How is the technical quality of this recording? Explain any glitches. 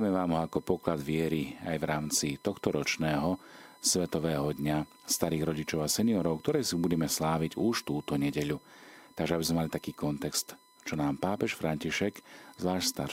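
The speech is marred by one steady fault: USB whine running through the whole recording. A fixed 1 kHz tone sits about 30 dB below the speech, from USB bus current drawn in 1 ms frames leaking in through power or ground. A spectrogram shows an unbroken thin horizontal line at 1 kHz from start to finish.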